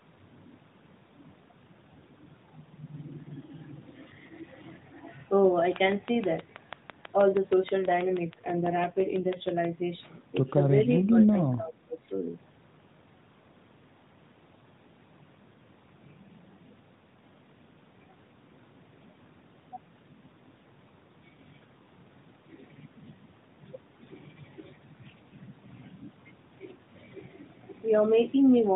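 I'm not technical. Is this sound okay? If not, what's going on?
No. From 7.83 to 9.49 s there is an AMR rate drop. The call uses the mobile-phone speech codec AMR, which squeezes the voice into a small amount of data. Here the network told it to use even less data for about a second and a half, probably to protect the signal on a weak connection. The voice doesn't stop, but it turns rougher, buzzier and more artificial until the quality returns.

Around 11 to 12 s the voice dips three times: 11.07 to 11.14 s, 11.30 to 11.36 s, and 11.55 to 12.06 s. This is likely speech suppressed in double talk. When both people talk at once, the phone's echo-cancelling system can't tell the talker from echo of the other side, so it turns the sound down. The first two dips are brief; the last lasts about half a second.

From 11.11 to 11.16 s there is a faint, very short echo leak. One caller is likely on a loudspeaker, and their phone didn't fully remove the sound its microphone picked back up. 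A quiet copy of the voice, delayed by 462 ms, slips through and is sent back, heard as a brief scrap.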